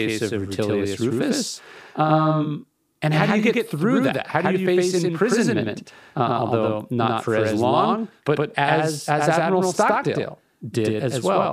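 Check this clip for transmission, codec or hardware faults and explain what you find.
One fault is present, running through the whole recording: a doubled audio track. The speech was likely captured twice, with a second, slower path mixed back in. A full-band copy trails about a tenth of a second behind at roughly equal level, giving every syllable a flat, dry slapback echo with no room decay.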